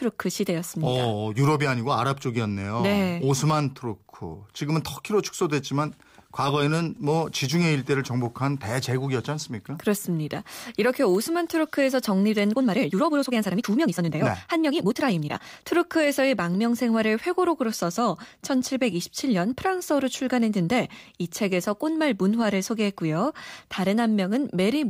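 A time-stretched section runs from 12.51 to 15.63 s, where the speech jumps to 1.76 times its pace with unchanged pitch, sounding rushed. This likely comes from software squeezing the passage to fit a length by dropping short pieces.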